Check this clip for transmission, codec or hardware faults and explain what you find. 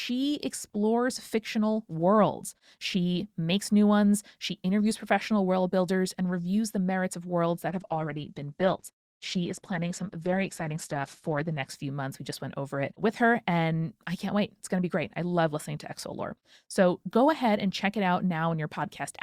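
One fault is audible, a switch of the adaptive stream to a lower bitrate. From 7.69 s to 11.69 s the player drops to a leaner encoding, consistent with Opus at about 12 kbit/s instead of 64 kbit/s, after the connection slows. Codec artefacts rise during that stretch. A spectrogram shows nothing above 12.2 kHz for those four seconds, with sharp edges at both switches, while the waveform stays continuous with no gap.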